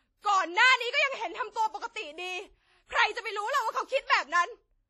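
A short speech clip with heavy codec damage all the way through. It rings and sounds washy, with hiss that swells and fades along with the speech, and nothing above about 13.3 kHz. That's likely WMA compression at a low bitrate, something like 32 kbps.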